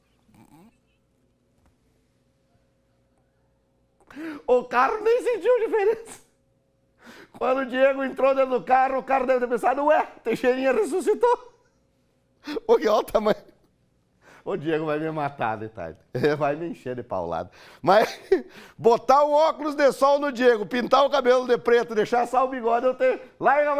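No technical faults can be heard anywhere in the signal.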